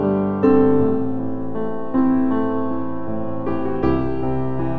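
Nothing goes wrong anywhere in the clip, and the only thing you'd really pick up is the call path itself, with everything above about 8 kHz missing, which fits a wideband codec like G.722.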